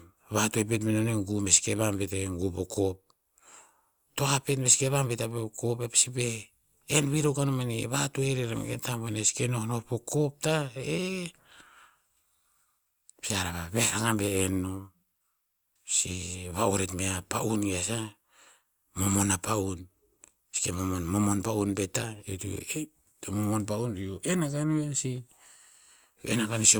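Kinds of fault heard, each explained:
No audible faults detected.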